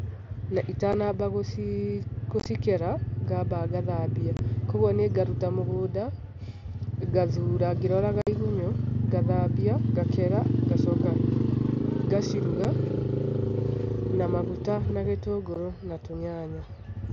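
Voice packets on the headset link were dropped without concealment. This unconcealed Bluetooth headset packet loss leaves abrupt holes of 7.5 to 52.5 ms at 0.93 s, 2.40–2.46 s (scattered, crackly), 4.37–4.39 s, 8.22–8.27 s after "ngathura ngĩroraga", 12.64 s and 15.54 s.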